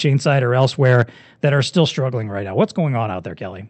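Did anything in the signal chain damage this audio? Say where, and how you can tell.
Yes. From 0.61 to 1.02 s, after "side or", the loudest peaks turn harsh and crackly, with their tops sounding flattened. This is microphone overload at the converter stage. The input was likely driven about 2 dB past full scale, so a small fraction of samples were clipped.

At 1.02 s, just before "that are still struggling", the sound and its background drop together in one abrupt step of about 4 dB. That is a microphone volume step-down in call processing, likely the software reacting to the clipped peaks by cutting the device's input gain.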